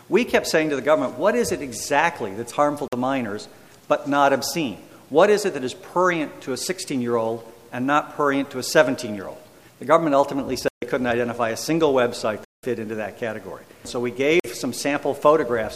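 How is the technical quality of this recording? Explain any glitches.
The recording has four dropouts where the sound cuts out completely and returns abruptly: at 2.88 to 2.93 s (about 46 ms), 10.68 to 10.82 s (139 ms), 12.45 to 12.63 s (186 ms), and 14.40 to 14.44 s (46 ms). These are blocks of digital silence, where zeros replaced the audio because the output buffer went unfilled in time or a calculation produced invalid values. The 46 ms gaps are 2048 samples long and the 186 ms gap is 8192 samples long.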